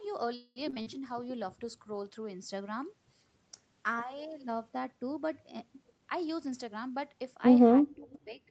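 At 0.35 s the packets stopped arriving on time and the jitter buffer ran dry, most likely a call audio freeze. The receiver stretched the last sound into a fading buzz for about 0.21 s, touching silence for about 20 ms, then resumed where it left off. Nothing was lost, but a gap now sits in the speech and everything after it is delayed.

Right after, short concealed packet loss strikes three times: at 0.70 to 0.74 s, 0.74 to 0.78 s and 0.82 to 0.88 s. Chunks of 20 to 40 ms never reached the decoder, so the receiver extrapolated from the preceding sound. Each hole comes out as a brief smear or wobble.

From 0.94 s to 3.00 s a call bitrate drop follows. The bandwidth estimate fell and the Opus encoder was cut from 32 to 16 kbps, holding the lowest rate for about 1.2 s. The speech becomes rougher and more watery until the rate climbs back.

Between 5.92 and 7.35 s a jitter buffer speed-up trims the backlog. 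The buffer had too much audio queued, so the receiver cut out pitch-period slices repeatedly, roughly 0.2 s in all. The speech runs at about 114% speed with unchanged pitch and sounds hurried.

From 7.83 to 8.42 s the talker's level dips, by about 25 dB at its deepest, over roughly 0.4 s in pieces. This is likely speech suppressed in double talk, with the echo canceller ducking the speech while both sides spoke at once.

Inside that stretch, at 8.11 to 8.19 s, a faint scrap of delayed speech appears about 30 dB down, lagging by 344 ms. This is likely echo leak, loudspeaker sound the far end's canceller failed to remove and sent back.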